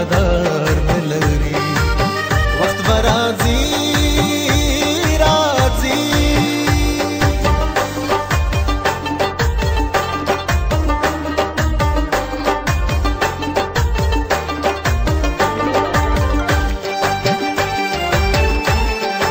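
No technical faults can be heard anywhere here.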